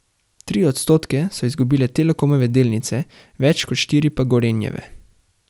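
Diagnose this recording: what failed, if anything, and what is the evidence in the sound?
The resampler restarted on every block, upsampling 24 kHz to 48 kHz in separate 100 ms chunks; the edge errors tick at 10 Hz throughout the speech.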